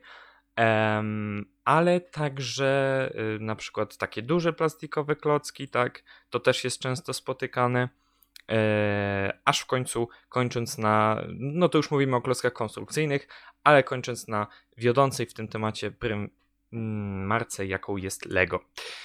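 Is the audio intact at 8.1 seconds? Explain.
Yes, at 8.1 seconds the speech plays through without any audible fault.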